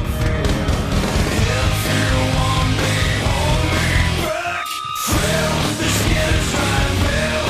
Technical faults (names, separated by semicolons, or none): channel delay (doubling)